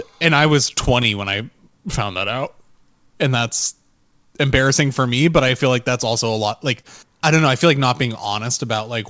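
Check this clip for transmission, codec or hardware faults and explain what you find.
Three faults show up in this speech clip, all tied to timing rather than tone.

The clock drift between sender and receiver runs through the whole clip. Small hiccups recur at uneven intervals and give the pacing a faintly unsteady feel. The sender's audio clock runs slow, by roughly 3 percent, so the receiver's jitter buffer keeps draining and has to be topped up.

Repeated timing corrections from 0.4 to 8.66 s are how the receiver copes. Playback is stretched to about 98 percent speed, which adds roughly 200 ms overall. The receiver repeats short pieces so it never runs dry. Each correction is slight, but together they drag the tempo a little.

A short stall from a late packet sits from 6.81 to 6.87 s. One sound is held too long, with a faint buzz or dip. A packet arrived late and the jitter buffer ran empty, so 32 ms of the preceding sound was stretched to fill the gap. 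Nothing is missing, and playback picks up from the same spot. Throughout, the G.722 call codec leaves nothing above 8 kHz, as expected for that path.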